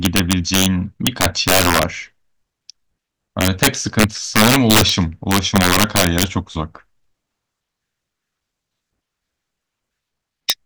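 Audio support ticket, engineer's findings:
Integer overflow in the gain/summing stage: loud peaks exceed the integer limit and wrap to the opposite sign instead of clamping, so each overshoot jumps across the full range. Heard as violent cracks on loud speech, far harsher than clipping, at 0.05–0.66 s (about 4 dB over), 1.07–1.83 s (about 12 dB), 3.41–4.89 s (about 9 dB), 5.31–6.24 s (about 10 dB), and a single crack at 10.50 s (about 4 dB).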